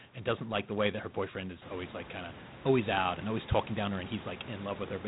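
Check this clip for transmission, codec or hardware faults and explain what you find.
One codec fault runs through the whole clip. G.726 ADPCM damage is present from start to finish. The codec sends only a few bits per sample of the gap between each sample and a running prediction. This coarse coding leaves a harsh, rasping hiss that rises and falls with the speech. The damage is plainly audible, which fits the 24 kbit/s mode. Nothing above 4 kHz comes through. The room's background noise rises by about 12 dB around one and a half seconds and then sits about 18 dB below the speech.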